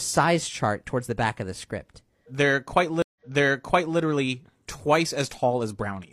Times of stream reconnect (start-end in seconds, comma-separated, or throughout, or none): 3.02-3.99